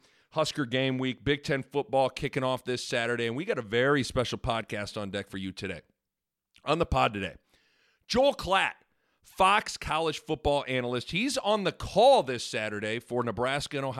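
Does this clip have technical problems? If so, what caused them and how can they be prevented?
No, nothing in this recording needs fixing.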